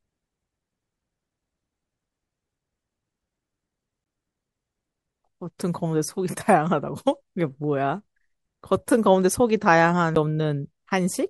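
At 4.04 s and again at 10.15 s the speech suffers a CD skip: the laser lost its track and landed on another turn of the spiral, so the player muted very briefly, a little longer at the first event than at the second, and resumed from another point. Each is heard as a tick followed by an abrupt jump in the speech. A waveform shows a near-silent gap with mismatched edges, and a spectrogram shows a thin vertical broadband line with discontinuous harmonics on either side.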